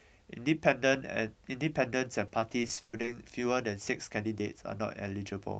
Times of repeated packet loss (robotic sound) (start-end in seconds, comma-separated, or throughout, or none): 2.27-3.09